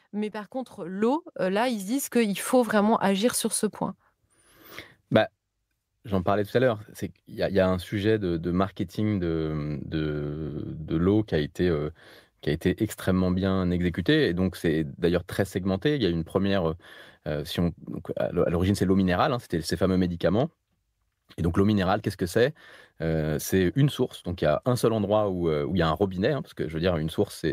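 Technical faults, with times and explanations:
1.02 s and 2.04 s: microphone volume stepped up, about 8 dB then about 4 dB; voice and background jump together in one step, unlike a gradual ramp.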